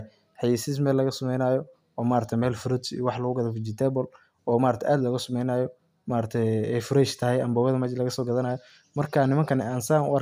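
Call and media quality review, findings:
Nothing to flag here; the speech came through without any audible faults, so no ticket is needed.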